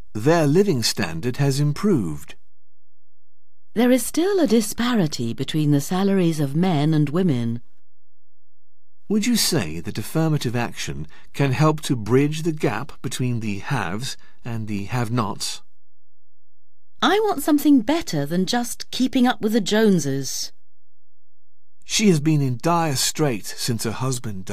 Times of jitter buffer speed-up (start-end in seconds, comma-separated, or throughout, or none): none